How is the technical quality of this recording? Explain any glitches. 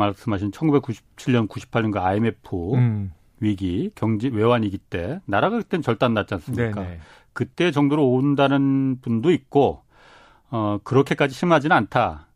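Nothing in the recording stood out on listening, and no glitches could be heard anywhere in it.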